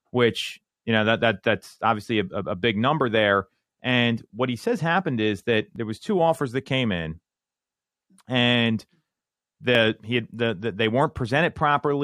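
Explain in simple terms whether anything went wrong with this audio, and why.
An overlap between stream segments occurred: the audio arrived in 2-second pieces whose timing marks overlapped, so the player discarded a sliver of real speech. This causes tiny clicks or skips at 1.79 s (after "know that that that's"), 5.76 s (before "was two offers that") and 9.75 s (before "he had the the").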